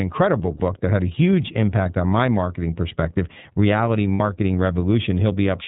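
The whole recording passes through the iLBC codec, and the plainly audible coding damage, with its 30 ms framing, fits the 13.33 kbps mode. Each frame's excitation is coded independently and nothing above 4 kHz survives, so the speech sounds band-limited, slightly rough and synthetic.

At 0.57 s, lost iLBC frames leave a 30 ms gap, which points to a single missing frame. The decoder covers it by repeating the last pitch cycle mixed with noise, heard as a brief held, buzzy vowel. At 4.13 s a 60 ms loss, likely two frames, produces a longer, fading smear of the same kind. Because iLBC frames stand alone, normal speech returns almost immediately both times.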